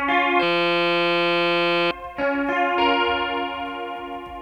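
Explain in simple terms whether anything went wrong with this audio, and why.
A system hang loop happened here. From 0.43 to 1.91 s the computer or its audio driver froze, but the sound hardware kept replaying the same tiny slice of its buffer, a 5.8 ms piece (which fits a 256-sample buffer) repeated about 255 times. Because the slice is so short, it becomes a steady 172 Hz buzz instead of a stutter, and roughly a second and a half of the real audio is lost.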